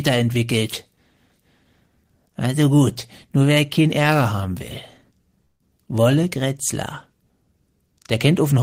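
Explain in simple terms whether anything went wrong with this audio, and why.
At 5.45 to 5.62 s there is a call audio freeze. The last sound drags on, fades, then goes silent, likely because packets arrived late. Speech resumes where it stopped. Nothing is lost.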